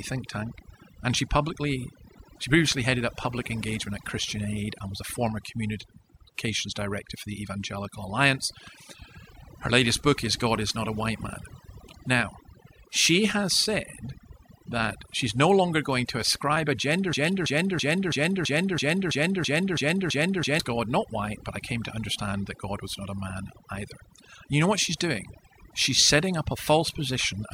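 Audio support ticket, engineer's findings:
Overdone noise removal, full length. Background pulled down and broken into twinkling specks. Denoiser set too aggressive, gating individual bands near its noise estimate and taking quiet speech detail with them.

Broken-record loop, 17.13 to 20.60 s. One 330 ms fragment repeats exactly, back to back, ten times. Audio due in that span is lost. Likely cause is a stalled player, encoder or stream resending its last buffered fragment.

Corrupt frame decoded, 17.26 to 17.30 s, inside the loop. Short chirp or noise burst peaking around -20 dBFS, spanning a couple of frames. Decoder played frames with flipped bits, so misread gains and codes put energy at the wrong frequencies.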